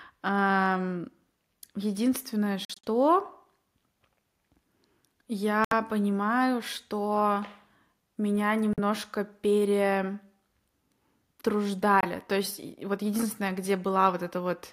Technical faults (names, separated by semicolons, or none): Bluetooth dropout